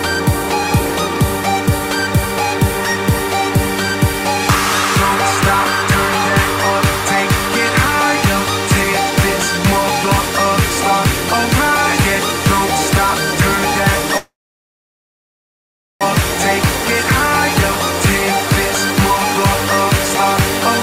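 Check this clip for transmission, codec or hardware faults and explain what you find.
One transmission fault. From 14.17 to 16.03 s there is a call audio freeze: the last sound trails into a brief fading buzz or hiss, then about 1.7 s of silence, likely from packets stalling and the jitter buffer running dry. Unlike a dropout, the audio resumes exactly where it stopped, with nothing lost, just arriving 1.8 s later.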